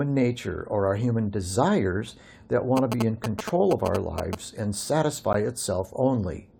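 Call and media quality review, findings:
GSM signalling bursts, 2.77–4.35 s: galloping ticks and short buzzes at about the level of the speech. A nearby 2G handset is signalling, and its 217 Hz bursts are rectified in the audio path. Spectrogram shows a 217 Hz harmonic comb in clustered groups.

Gap between stream segments, 5.33 s: hard-edged dropout of about 13 ms. Segment timestamps leave a hole at a boundary, which fits 6 s segments, and the player pads it with silence. No audio is missing. Waveform shows a flat silent run with abrupt edges.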